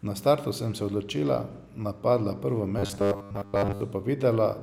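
From 2.79 to 3.81 s the speech becomes a rigid metallic 100 Hz buzz: robotic sound from repeated short buffers, likely from a 10 ms chunk looped while most real audio was skipped. The waveform shows identical 10 ms cycles, and the spectrogram shows flat harmonics every 100 Hz.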